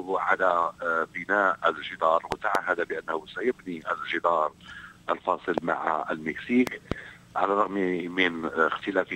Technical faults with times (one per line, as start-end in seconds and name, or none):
2.32-2.57 loud pop
5.58-5.60 loud pop
6.67-6.94 loud pop